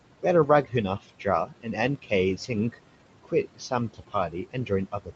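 The background sinks between phrases and swells back under them, throughout. These are noise suppressor artifacts: the suppressor pulls down the bands it judges to be steady room noise, by about 18 dB, adjusting frame by frame so the leftover noise pumps.

From 0.2 to 2.78 s, soft consonants and word endings turn faint or swallowed, adding up to under a second of affected sound. From 3.24 s to the end they fade again. In both spans the noise suppressor cut speech, mistaking quiet speech for noise and lowering it by up to about 19 dB.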